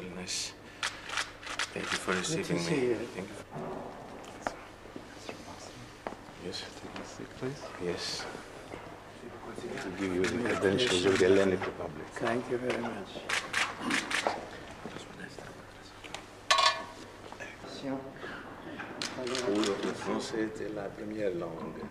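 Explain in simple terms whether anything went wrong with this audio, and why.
Two quick jumps in the sound, at 13.73 s and 19.65 s. That's likely a dropped buffer (overrun): the recorder didn't grab its samples in time, so a sliver of audio, roughly 30 ms and then 10 ms, was overwritten and the edges got stitched together.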